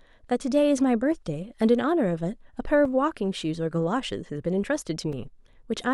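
At 2.85 s and 5.13 s the speech breaks into a block of digital silence, gaps of about 2.3 ms and 4.4 ms, likely where the output buffer went unfilled. Each is heard as a tick or dip, seen as a flat gap with a vertical broadband line.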